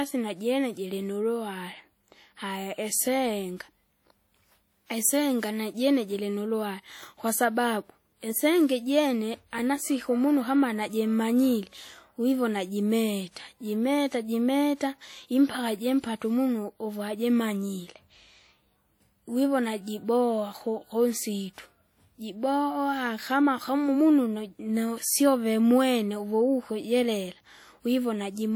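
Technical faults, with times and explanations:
Throughout: WMA compression, likely a WMA 1 encode at around 48 kbps. Quantisation noise smears over tens of milliseconds around each sound, giving a ringing, washy tail and a hiss that swells and fades with the level, unlike steady broadband hiss.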